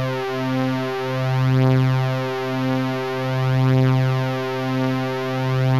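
Nothing stood out as a technical problem on listening to this recording of sounds.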